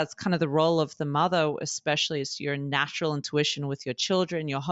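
A short speech recording, and nothing in it is technically wrong. There are no problem spots to time and no causes to trace.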